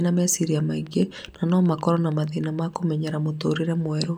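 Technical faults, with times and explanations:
0.87–2.77 s, train of clicks: there's a run of about fifteen near-identical ticks at an even 6.3 per second, peaking about as loud as the speech itself and carrying on through the gaps. It's likely interference from nearby gear or a faulty connection or power supply.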